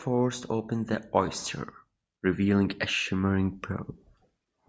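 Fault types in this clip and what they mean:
Automatic gain rising: finding the input too quiet, gain control lifts speech and background together, about 4 dB then about 5 dB; the waveform envelope swells gradually.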